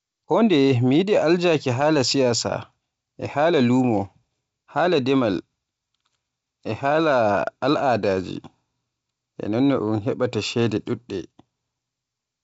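Nothing's technically wrong with this speech, which comes through G.722 wideband telephone coding at 64 kbit/s, so the missing content above about 7 kHz is simply how that format sounds.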